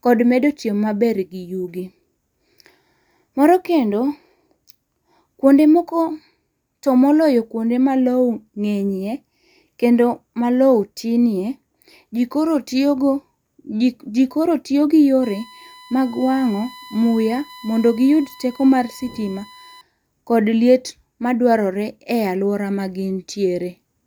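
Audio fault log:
15.23–19.81 s: USB whine, a steady 1 kHz tone about 25 dB under the speech, from 1 ms bus frames leaking through power or ground; a flat horizontal line on the spectrogram.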